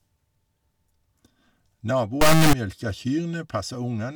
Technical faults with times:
2.21-2.53 integer read as float

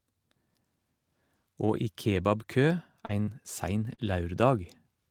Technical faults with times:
3.05-3.30 short concealed packet loss
3.09-3.29 lost packet rebuilt from error correction
3.94-4.00 short concealed packet loss
3.98-4.00 lost packet rebuilt from error correction

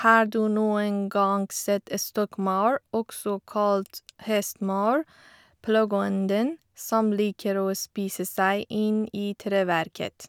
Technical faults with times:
none

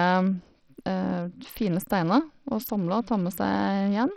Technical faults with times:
0.00-4.17 Bluetooth SBC compression
2.71-4.17 timecode bleed

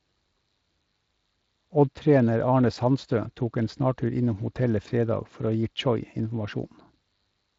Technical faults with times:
none

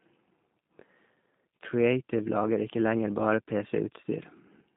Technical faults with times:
0.00-4.76 G.729 codec

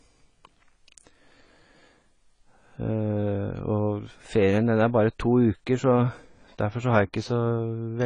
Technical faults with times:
0.00-8.06 AAC compression

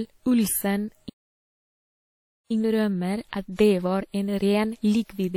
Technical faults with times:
0.00-5.36 WMA compression
1.09-2.51 playback stall
2.51-5.36 time-compressed catch-up

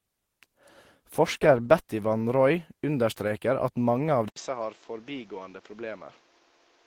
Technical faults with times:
1.35-1.78 lost packet rebuilt from error correction
1.39-1.53 short concealed packet loss
1.80-1.83 short concealed packet loss
4.28-6.87 input switched to a poorer device

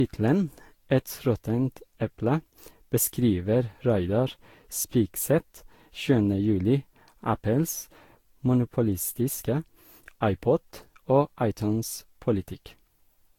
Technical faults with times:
0.00-13.39 generation loss

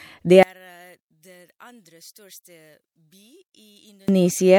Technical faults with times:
0.43-4.08 one channel inverted

